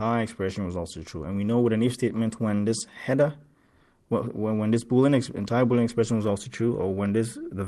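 Nothing stood out on listening, with the audio heard through a call path whose coding fits a bandwidth of about 12 kHz.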